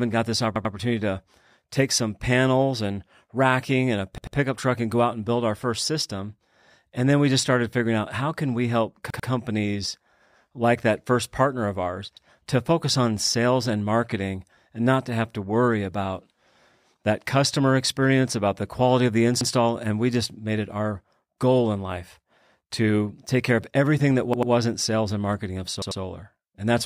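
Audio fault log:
0.56, 4.18, 9.10, 12.17, 19.41, 24.33 and 25.82 s: repeated buffer. New audio came late, so a 93 ms piece, fitting a 4096-sample buffer, replays twice (once at 12.17 and 19.41 s) as a hard-joined stutter. The waveform shows identical copied blocks, and the spectrogram shows vertical edges at each join.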